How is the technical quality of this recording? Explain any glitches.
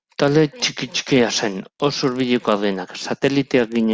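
The recording has one glitch running the whole way through: a steady ticking riding on the speech, at 25 ticks per second. It comes from the resampler restarting on every block. The audio was converted from 48 kHz to 16 kHz in 40 ms chunks, each handled on its own. At every chunk edge the converter had no real neighbouring samples to work from, so each boundary gets a small error. At that rate the ticks nearly blur into a low buzz, and it only shows up while someone's talking, going quiet in the gaps.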